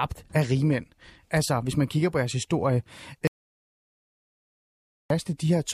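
A speech clip with an audio dropout to silence from 3.27 to 5.10 s, right after "kigger på jeres historie": about 1.83 s of dead silence, likely a lost input link, with none of the room tone a natural pause or gated noise floor would keep.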